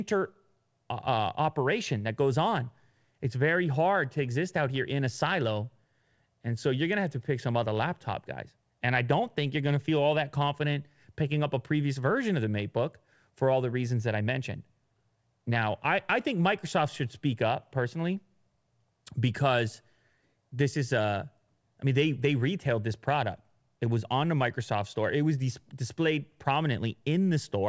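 No faults are audible in this speech; it has come through a wideband call path with nothing above 8 kHz, consistent with G.722 at 64 kbps.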